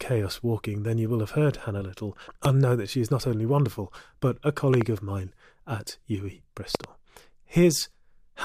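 Loud pops land at 2.45 s, at 4.74 to 4.83 s and at 6.75 to 6.86 s, the last two as double pops. Each is a sharp thump standing roughly 15 dB above the speech, which carries on underneath. These are likely sudden voltage pulses from a switch, plug or static discharge.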